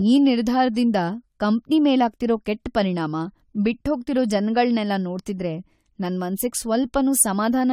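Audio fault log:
Throughout, generation loss: the speech has a swirly, smeared, hollow quality, more than its bandwidth alone would explain, with consonant attacks blurred and nothing above 18.4 kHz. The likely cause is repeated lossy coding, around three passes through a codec whose character fits AAC-LC at 64 kbit/s. Each re-encode quantises on a shifted frame grid, so fresh noise and spectral gaps pile onto the earlier ones instead of cancelling.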